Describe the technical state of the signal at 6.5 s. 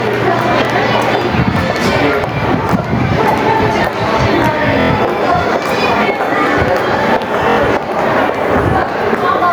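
At 6.5 s the signal shows gain pumping, which runs through the entire clip rather than appearing only at this moment. The gain swings by roughly 10 dB. The likely cause is input gain set far too high, with a fast limiter or compressor clamping down on every peak. Dynamics are squashed, leaving loud and soft passages unnaturally close in level.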